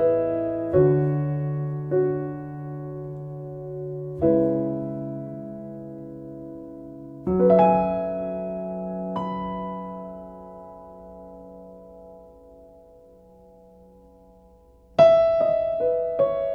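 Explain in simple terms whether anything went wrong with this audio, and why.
Nothing went wrong here.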